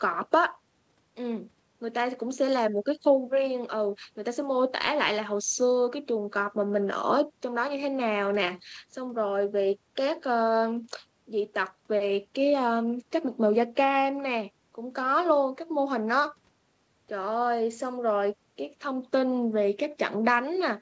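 No technical faults can be heard in the speech. The audio has passed through a call's microphone processing and a wideband call codec, and nothing comes through above 8 kHz, which fits G.722 at 64 kbps.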